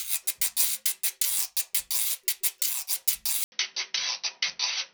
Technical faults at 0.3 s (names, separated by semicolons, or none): none